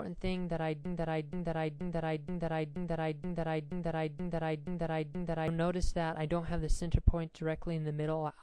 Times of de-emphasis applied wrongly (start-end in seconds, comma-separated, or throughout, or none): none